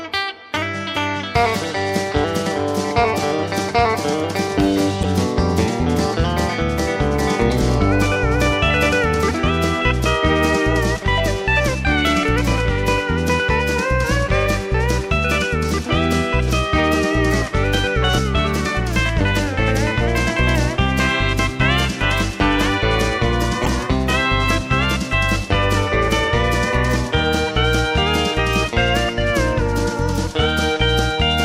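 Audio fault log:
5.01–5.05 s and 23.63–23.67 s, damaged data in a compressed stream: two brief glitches of about 40 ms each, where corrupted frames throw the decoder off until it resyncs at the next frame header.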